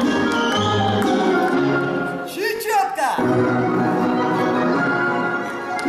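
A short stutter at 2.56 s, lasting to 2.60 s: a repeated buffer, where a 20 ms piece plays twice more after new audio arrived late.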